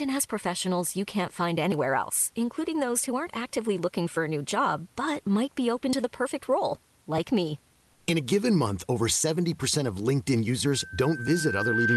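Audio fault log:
1.72 s and 5.93 s, dropped buffer (overrun): two quick jumps where the sound skips forward with no gap at all. The first lands just before "else including those who", the second between "but might be open" and "to the perfect role". Each skip loses roughly 30 ms, likely because the capture side didn't read its buffer in time and fresh samples overwrote it, so the two edges got butted together.
7.93 to 8.07 s, comfort noise in place of the background: for about 140 ms the real room background gives way to a flat, featureless hiss, about 2 dB quieter than what surrounds it. That's likely the Opus DTX behaviour, where the sender goes quiet in a pause and the receiver fakes a background shaped roughly like the real one. The background sits low, about 38 dB under the loud parts.
10.66 s to the end, loudspeaker feedback squeal: a single 1.6 kHz tone creeps in and swells over about a second and a half until it sits around 5 dB above the speech. 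The mic is hearing the speaker it feeds, and at that frequency the loop gain went past one, so the tone keeps feeding itself and growing. Nothing breaks the loop before the clip ends. The Opus call path and the room noise are both part of the picture here.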